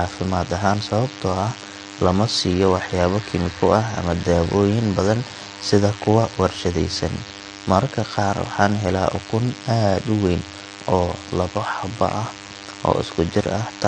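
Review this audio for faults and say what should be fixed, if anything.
A DECT cordless phone buzz runs through the whole clip: a thin, steady buzz at 100 Hz with a dense stack of harmonics, sitting roughly 20 dB below the speech. A DECT handset or base station nearby transmits a short radio burst every 10 ms. The recording chain's audio circuitry rectifies that RF, turning the burst train into an audible 100 Hz tone. Keep DECT equipment a few metres from the microphone, preamp and interface, and use shielded, properly grounded cabling.

The speech also carries clearly audible codec damage from start to finish. There is no content above 9.6 kHz, so sibilants and breaths sound dull. Sustained vowels take on a warbling, smeared texture, and consonants have a fizzy edge. The likely cause is AAC-LC encoding at a low bitrate; the damage fits something around 32 kbps. At that rate the encoder lowers the cut-off and quantises the spectrum coarsely, leaving gaps that it fills with substitute noise. 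Record and exchange audio losslessly, or encode AAC at a much higher bitrate.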